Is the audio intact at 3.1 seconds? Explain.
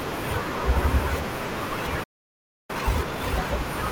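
No. At 3.1 s the speech sits inside a time-compressed catch-up running from 2.70 to 3.34 s. After a stall, the player drains its backlog by cutting out short pieces and cross-fading the remainder, playing at 2x speed. The speech sounds hurried at unchanged pitch.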